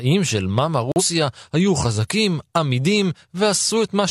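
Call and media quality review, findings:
Digital broadcast dropout, 0.92 to 1.02 s: receiver lost signal or rejected a frame on checksum and muted until valid frames resumed. Speech cuts to silence for about 0.1 s, consistent with one lost frame of roughly 43 ms; that audio is gone.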